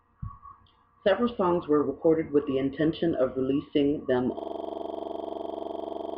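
System hang loop from 4.39 s to the end of this speech clip: right after "intention of releasing them", a 42.67 ms slice of audio repeats exactly, about 42 times, at 23.4 Hz, producing a rapid machine-gun stutter. This happens because the computer or driver froze while the sound hardware kept replaying the same ring buffer, which fits a 2048-sample buffer.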